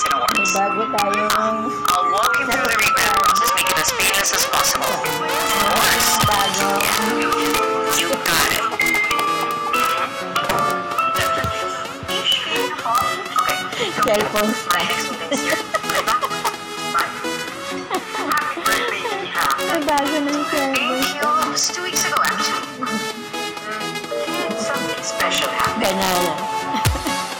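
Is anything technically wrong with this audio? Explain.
Yes. Integer overflow runs through the whole clip. The signal is driven about 6 dB too hot for the integer format. When a peak passes the largest value, it is not held at the limit. It wraps around to the opposite extreme instead. Only a small fraction of samples cross that line, well under one percent. Each crossing throws a full-range jump into the waveform. The result is sudden, violent cracks on the loudest moments, far harsher than ordinary clipping.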